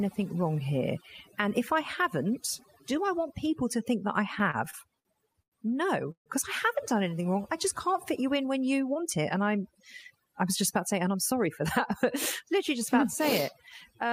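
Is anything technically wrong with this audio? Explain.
Yes, several problems. Overdone noise removal, throughout: the background is near-silent and twinkling, because an overly aggressive noise reducer is cutting frequency bands along with quiet speech detail.

Repeated stalls (stutter), 4.39 to 5.54 s, just after "to think that i": the speech drags and stutters through nine brief hangs totalling 243 ms, the longest 97 ms. Late packets kept emptying the jitter buffer, so the receiver extended the last sound each time.

Call audio freeze, 6.12 to 6.28 s: the sound hangs for 140 ms, 90 ms of it silent, then resumes without losing anything. The likely cause is delayed packets draining the jitter buffer.

Jitter buffer slow-down, 6.98 to 7.92 s, between "i haven't done" and "fit you in when": the speech runs at 92% speed with unchanged pitch, drawn out by 80 ms of repeated pitch periods added to rebuild the buffer.

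Jitter buffer speed-up, 10.11 to 11.48 s at 106% speed and 11.91 to 12.60 s at 105% speed, the second ending before "just about to say": the speech sounds hurried at the same pitch. The receiver trimmed pitch periods, roughly 100 ms and 40 ms, to shrink an overfull buffer.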